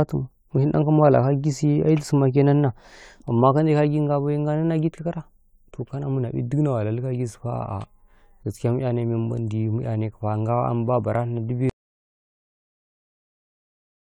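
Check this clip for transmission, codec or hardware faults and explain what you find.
One fault is present: an audio dropout to silence from 11.7 s to the end of the speech, about 2.5 s. The signal stops mid-flow and falls to silence with no room tone, the likely cause being an input lost while recording continued to write empty samples.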